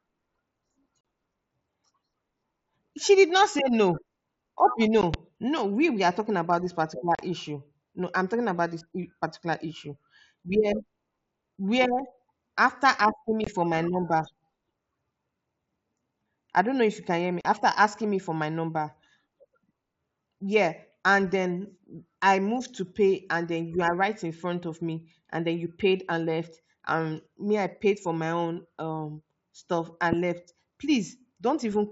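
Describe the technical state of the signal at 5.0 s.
At 5.01 s, unconcealed Bluetooth headset packet loss: about 15 ms of speech, likely two lost packets, drops out, replaced by silence or an idle pattern, with abrupt edges, not smoothed over as concealment would.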